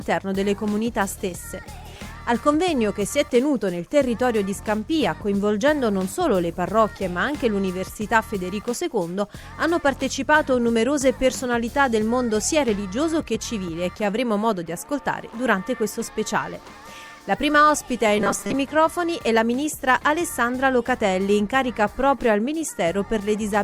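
Robotic sound from repeated short buffers appears from 18.18 to 18.54 s. For that stretch the audio loses its natural texture and takes on a rigid, metallic buzz locked at 200 Hz. The cause is likely a playback stage starved of new data that keeps replaying a fragment about 5 ms long. That repeat period stamps its own fixed pitch onto the sound, while roughly half of the real audio in that span goes missing.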